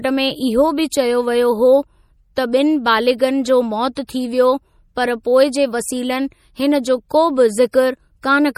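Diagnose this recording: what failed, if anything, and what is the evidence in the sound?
The codec stage is the culprit here, and it's most likely MP3 compression. The speech has that watery, swirly texture where weak frequency lines drop in and out between frames, and there's nothing above 18.4 kHz because the encoder lopped off the treble to save bits. The damage is plainly audible, which fits a low bitrate somewhere around 48 kbps, where the encoder is starving and throwing detail away.

You can also hear pre-echo, from the same codec, at 3.95 s, 4.07 s and again from 7.71 to 7.74 s. Each sharp attack gets a short hiss in front of it, roughly 17 to 21 ms long, and the onset itself sounds smeared. That happens because the encoder spreads its quantisation noise across the whole transform block, so noise sized for the loud attack leaks into the quiet moment just before it.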